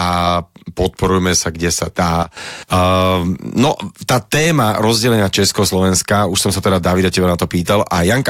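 At 2.23 s a sudden gain jump drops the speech and its background noise together by about 13 dB, restoring them at 2.37 s. The waveform shows a sharp step down, and the spectrogram a darker vertical band, likely from a gain setting applied without a ramp.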